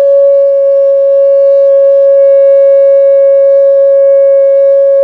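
No faults to report: the music runs without any audible defect.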